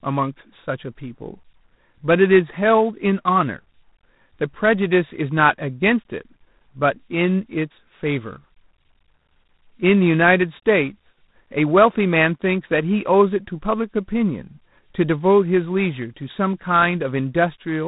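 From start to end the speech carries G.726 ADPCM damage: nothing above 3.8 kHz, plus a harsh, rasping hiss that rises and falls with the speech level, which fits 24 kbit/s coding. Unlike plain band-limiting, the grit moves with loudness.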